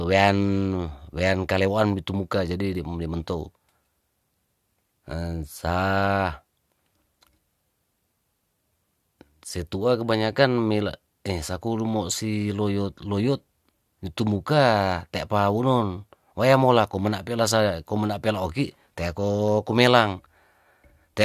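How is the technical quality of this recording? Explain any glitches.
No glitches or technical faults can be heard anywhere in the recording, so there is nothing to explain.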